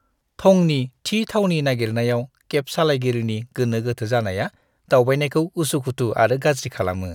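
No audible technical faults.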